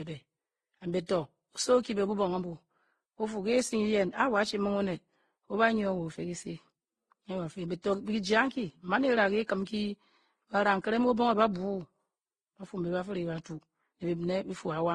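Speech, with layered lossy coding artefacts throughout. Nothing is heard above 12 kHz. The artefacts of the different codecs overlap and are heard together. This is likely transcoding between lossy codecs, which fits low-bitrate Vorbis, then AAC, then Opus, each adding its own damage.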